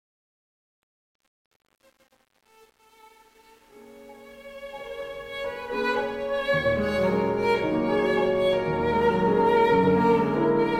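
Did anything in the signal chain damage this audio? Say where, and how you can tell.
Yes. The fade-in at the start shows truncation distortion, from 0.00 s to 5.82 s. Its quiet early part is the problem. From 0.00 s to about 4.81 s the sound is gritty. That points to a gain or sample-format stage that kept too few bits and added no dither. The graininess fits roughly 9-bit resolution. Near the bottom step, the waveform collapses into coarse square steps.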